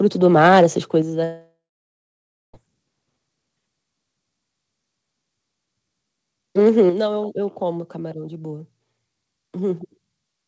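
Right at the start, from 0.24 to 0.65 s, the loudest syllables get a harsh, crackly edge. That's microphone overload: the input level was likely set too high, so peaks overshoot the converter's ceiling by about 4 dB and their tops get sliced flat. Only a few percent of the samples in that stretch are actually clipped, but it's enough to hear as gritty distortion on the louder speech.

Just after that, at 1.02 s, the whole level drops by about 5 dB in a single step, voice and background together. That's the microphone volume stepped down, most likely the call software reacting to that clipped burst and pulling the device's input gain back. It happens again at 6.90 s, this time by about 6 dB, with the same abrupt one-step fall in loudness rather than a smooth fade.

Between those two steps, from 1.24 to 2.55 s, there's a long network dropout, likely a gap where no packets made it through. 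About 1.3 s of the speech is lost. The receiver first stretches the last bit of sound into a fading buzzy hiss, and for roughly the final 0.95 s of the gap there's just silence. The speech picks up again afterwards with the missing part simply gone. Throughout, the call codec's band limit is audible as nothing above 8 kHz, which fits a G.722 wideband path.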